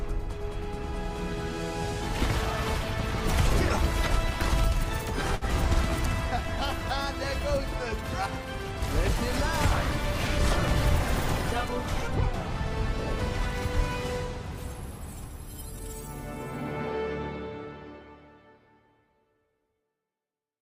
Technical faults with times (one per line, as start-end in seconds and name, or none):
5.35-5.44 short stall from a late packet